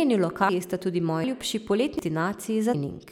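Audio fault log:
0.49, 1.24, 1.99 and 2.74 s: audio missing between chunks. Around a third of a second of speech vanishes at each join, likely from 1 s chunk handoffs, so it skips.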